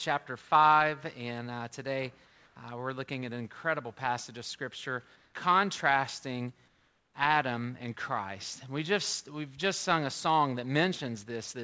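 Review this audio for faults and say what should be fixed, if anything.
In three pauses the real background drops out and is replaced by a flat, featureless hiss: 2.26 to 2.56 s, 5.16 to 5.34 s, and 6.68 to 7.14 s. Where the background sits about 34 to 43 dB under the loud parts, the fill is about 2 dB quieter in the first gap, level in the second, and about 3 dB down in the third. It's likely comfort noise in place of the background: the sender's activity detector judged those gaps empty and stopped transmitting, so the receiver filled them with synthetic noise. That happens over a call path that passes nothing above 8 kHz, which fits G.722. To prevent it, turn off discontinuous transmission or voice-activity gating on the sending side.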